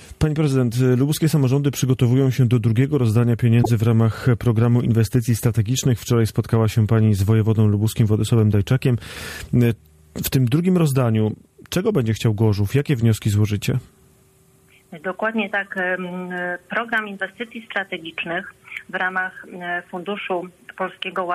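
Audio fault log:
3.63–3.70 s, 7.88 s, 11.31 s: corrupt frame decoded. Brief chirps or noise bursts, loud first, then moderate, then faint. Flipped bits in a few compressed frames were decoded anyway, so misread gains and codes put energy at wrong frequencies.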